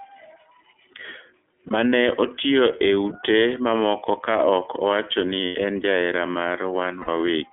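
Throughout, the speech is confined to a telephone band of roughly 300 Hz to 3.5 kHz, with a rough, slightly synthetic texture that fits the iLBC codec in its 30 ms frame mode. Unlike a plain low-pass filter, the harshness comes from coarse excitation coding, not just missing highs.

Lost iLBC frames occur at 1.67 to 1.71 s, at 5.46 to 5.56 s between "mamoko ka ok owachoni" and "en jahera", and at 7.01 to 7.09 s. Each gap becomes a held, buzzy vowel rather than silence, with the longest, about 90 ms, consistent with three missing frames. The voice returns immediately afterward instead of smearing.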